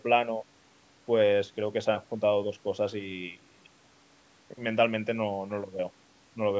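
No technical faults can be heard in this speech; the call microphone processing trims the lowest bass, as it normally does.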